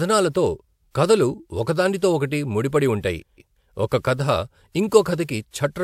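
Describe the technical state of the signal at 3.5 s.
At 3.5 s the signal sits inside a frames-out-of-order fault running from 3.20 to 3.55 s, just after "ఓకటి ముడి పడి ఉంటాయి". Two adjacent runs of frames, each lasting roughly 0.19 s and fitting a few frames apiece, reached the decoder swapped and were played in that order. The speech in this stretch comes out with its halves exchanged, a garbled flutter, while the overall timing stays intact.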